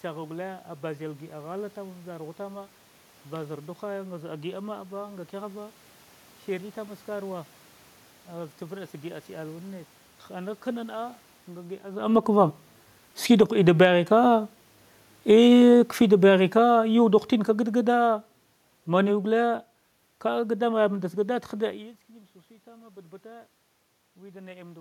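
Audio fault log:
13.17 to 13.98 s, automatic gain falling: shortly after the talker shifts position at around 12 s, the gain control judges the level too high and pulls its gain down by about 6 dB over less than a second. The voice and the room noise behind it sink together, so the dip sounds like a fade in the channel, not in the talker.
13.89 to 15.73 s, automatic gain rising: finding the input too quiet, the control climbs back by about 5 dB over nearly two seconds. Voice and room noise swell together in one slow ramp, giving a brief pumping after the previous drop.
15.15 to 21.43 s, automatic gain falling: the control again decides the input is too loud and lowers gain by about 12 dB over more than six seconds. The voice recedes gradually with its background, a long fade the ear reads as distance growing, though the cause is the gain stage.
22.64 to 24.76 s, automatic gain rising: after the talker moves at around 21.5 s, the input falls by about 21 dB, and the control answers by raising gain about 4 dB over two seconds. 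The voice and the room noise climb together, only partly restoring the lost level.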